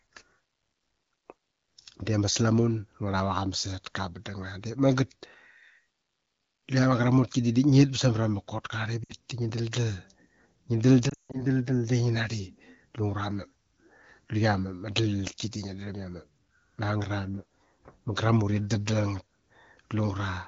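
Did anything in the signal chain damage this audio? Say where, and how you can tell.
Yes. At 9.03 to 9.14 s the speech briefly drops to near silence, and from 11.09 to 11.42 s it drops to near silence before recovering weak or rough. These are lost AMR speech frames on the network and radio side. Corrupted frames failed their checks, so the AMR wideband (HD Voice) decoder, otherwise coding the speech cleanly, repeated its last good pitch and vocal tract settings at falling gain. The first gap covers about 60 ms. The second loses about 200 ms scattered across 240 ms, with its longest unbroken run of about 160 ms long enough for the concealed sound to die away.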